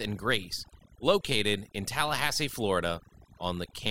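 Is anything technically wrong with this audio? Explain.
Yes. The speech suffers from overdone noise removal throughout. The noise reducer was set too aggressively. It cuts individual frequency bands whenever they sit close to its noise estimate, taking quiet speech detail with them. The background drops and breaks up into twinkling specks.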